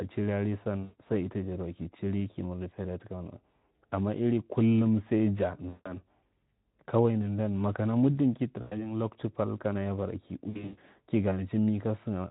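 VoIP packet loss concealed by the speech codec occurs four times: 0.83 to 0.98 s, just before "san ita" (about 120 ms missing); 5.69 to 5.91 s (160 ms); 8.61 to 8.91 s, between "nandan maka mudu ki" and "loktu pal kana ya" (100 ms); and 10.50 to 10.78 s after "kana ya bara ki", where 220 ms drops out in bursts over 280 ms. In each gap the Speex decoder extends the last pitch and spectral envelope with falling gain, producing a buzzy tone or coloured noise that fades. The speech stays weakened briefly after each gap as the decoder recovers.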